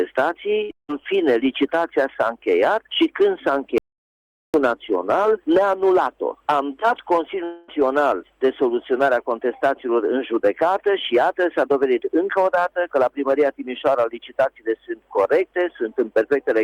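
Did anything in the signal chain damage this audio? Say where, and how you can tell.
Yes. At the network stage, a burst of packet loss at 0.63 to 0.71 s dropped about 60 ms. Concealment stretched and faded the last sound before the audio resumed further on.

A long network dropout is the likely cause at 0.71 to 0.90 s, where a fading fill gives way to about 150 ms of silence. At 7.44 to 7.70 s, roughly 0.24 s is bridged entirely by fading fill.

At capture, an audio dropout to silence at 3.78 to 4.54 s, likely from a lost input, leaves about 0.76 s of silence with no room tone.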